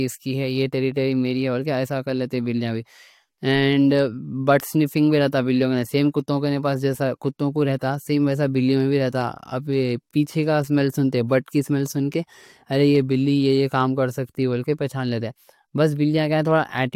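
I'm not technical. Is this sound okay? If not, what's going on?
Yes, nothing wrong can be heard in this recording.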